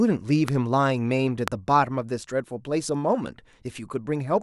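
A speech recording carries two loud pops, one at 0.48–0.50 s and a stronger one at 1.48–1.50 s, peaking roughly 15 and 20 dB above the speech, which carries on underneath. Each is likely an electrical pulse from a plug, switch, static or driver glitch.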